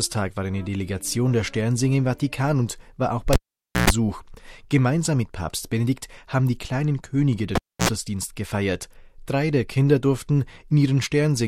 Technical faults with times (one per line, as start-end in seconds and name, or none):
3.33-3.90 cable pulled and plugged in
7.55-7.89 cable pulled and plugged in